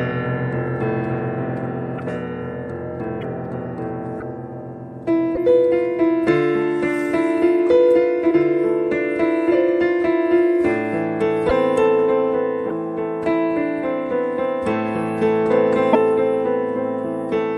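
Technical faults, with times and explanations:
1.97–2.00 s, 3.20–3.23 s, 4.19–4.22 s, 5.34–5.38 s, 8.30 s, 11.48–11.51 s, 12.68–12.71 s, 15.92–15.96 s: broken MP3 bit reservoir. Each spot is a brief glitch, about 14–32 ms long against a 26.1 ms frame, where the audio lurches ahead. The likely cause is dropped MP3 frames. The next frame reaches back into the reservoir for its borrowed bits, but gets bytes from the wrong frame, so it decodes as garbage for a moment.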